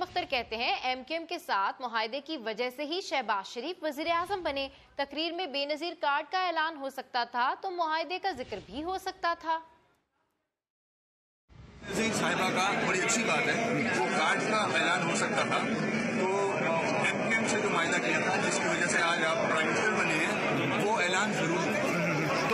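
At 14.06 s the audio drops abruptly, with no gap, to a lower-bitrate version of the adaptive stream. For six seconds, until 20.06 s, nothing above 11 kHz remains, the treble turns thin and synthetic, and codec artefacts rise, which fits a very low-bitrate HE-AAC tier.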